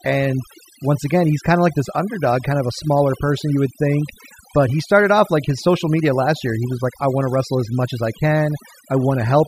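Speech, with overdone noise removal running the whole way through. The denoiser's been pushed too hard, so bands near its noise estimate get pulled right down along with the quieter bits of the voice. That leaves a background that drops away and breaks up into twinkly specks.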